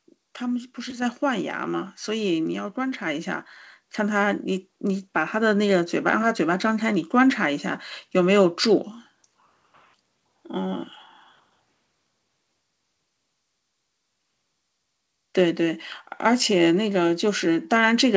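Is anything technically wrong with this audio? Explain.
Yes, there's a microphone volume step-up at about 1.02 s. The call software decided the mic was too quiet and bumped the input gain by about 5 dB in one go, so the speech and the background noise both jump louder together. The audio also has nothing above 8 kHz, which fits a wideband call codec like G.722 on the call path.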